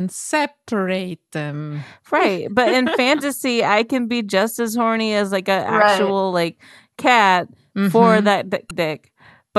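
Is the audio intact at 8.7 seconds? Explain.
No. From about 8.68 to 8.71 s there is damaged data in the compressed stream. A short run of the encoded bytes there is corrupt, so the decoder cannot read those frames properly, loses its place in the bitstream and has to hunt for the next valid frame header before decoding resumes. In the speech this comes through as a brief chirp, squawk, click or short hole lasting roughly 35 ms, a break rather than a clean continuation of the sound.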